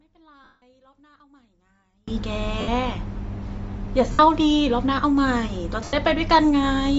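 A speech recording with a grainy, breathy edge on the voice throughout, where the upper spectrum has been thinned out and partly replaced by noise, likely from Bluetooth LC3 compression at a low bitrate, around 32 kbps, with damage that is plainly audible. From the start to 2.08 s the voice drops by about 38 dB, leaving little beyond a faint residue of the difference signal. This points to one channel inverted: the reversed polarity cancels the centred voice when the two channels are summed to mono. Lost LE Audio frames cause short dropouts at 0.44 to 0.62 s (180 ms), 2.61 to 2.68 s (70 ms), 4.12 to 4.19 s (70 ms) and 5.84 to 5.93 s (90 ms). During each gap the decoder repeats the last spectrum with scrambled phase, so the voice smears into noise, and in the longest gap it fades toward silence. The gap lengths fit runs of 10 ms frames.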